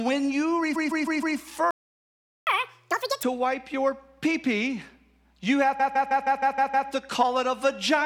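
Speech, carrying three kinds of transport fault. Repeated frames appear first at 0.75 to 1.37 s, just after "when you": a block of about 156.7 ms, which fits six compressed frames, is played four extra times. It sounds like a mechanical stutter, and it adds about 0.63 s to the running time. The same fault returns at 5.79 to 6.89 s, after "pee pee you have". The block is again 156.7 ms, but this time it repeats seven extra times, adding about 1.1 s of looped material. A playback stall follows the first stutter. From 1.71 to 2.47 s the output goes silent for about 0.76 s in mid-flow. The likely cause is the player running out of buffered data, or its output thread being blocked, until it recovered. Catch-up at higher speed comes straight after the stall. From 2.47 to 3.23 s, between "when you" and "wipe your pee pee", the backlog is resampled at 2.0 times normal speed, which raises the pitch by around ten semitones. 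This recovers the lost time before speed and pitch snap back to normal.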